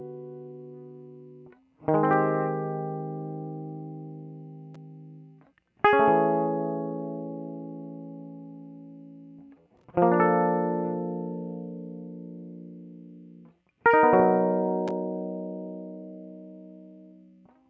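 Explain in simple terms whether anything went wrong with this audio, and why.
Nothing went wrong; this music has no audible faults.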